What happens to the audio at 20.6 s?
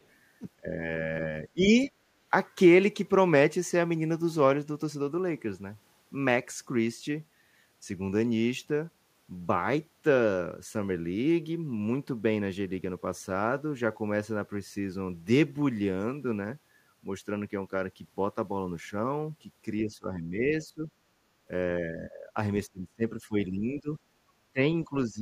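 At 20.6 s you're inside a stretch of speech suppressed in double talk, running from about 19.83 to 20.9 s. The speech dips by roughly 10 dB over around 0.7 s in total, likely because the echo canceller couldn't tell the talker from loudspeaker echo while both sides spoke, so it turned both down.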